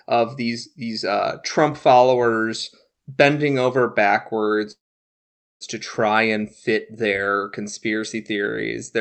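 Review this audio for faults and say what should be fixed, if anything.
Call audio freeze at 4.71 to 5.64 s: the sound stops, then about 0.85 s of near-silence follows before the speech resumes exactly where it left off. This is likely a jitter buffer running empty while packets were held up. No audio is lost, but everything after is pushed about 0.89 s late, within the 8 kHz-limited Opus call sound.

To prevent it, give the jitter buffer more adaptive headroom and fix the network delay spikes that stall packet delivery.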